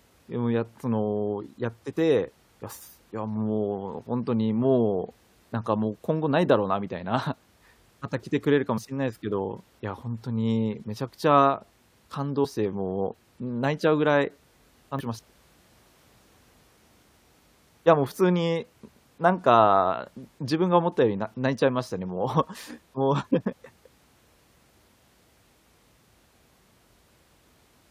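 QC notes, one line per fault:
8.77 s, 12.44–12.46 s, 14.99–15.01 s, 23.51 s: damaged data in a compressed stream. Each is a brief glitch of at most 20 ms where the decoder misreads corrupt frames and resynchronises on the next header.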